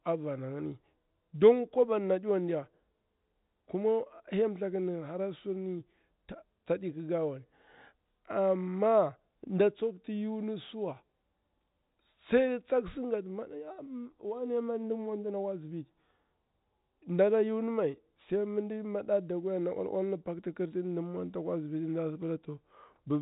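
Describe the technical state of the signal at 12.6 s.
At 12.6 s the signal is intact, carrying the expected G.711 telephone coding with its band ending near 3.8 kHz and no fault audible at that moment.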